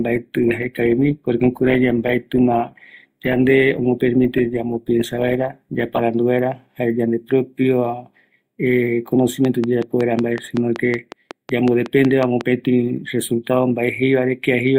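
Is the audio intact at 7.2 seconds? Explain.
Yes, the speech at 7.2 seconds plays through without any dropout, click, distortion or other audible fault.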